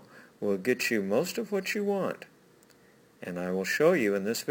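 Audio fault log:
Throughout, imaging from sample-and-hold upsampling: the audio was raised to a higher rate by holding each sample with no smoothing filter, and the sound points to roughly a 22 kHz source taken to 48 kHz, so the holds are uneven. Mirror copies of the spectrum appear from about 11.03 kHz to 22.05 kHz, at about 21 dB below the signal, heard as a metallic fizz that rises and falls with the sound.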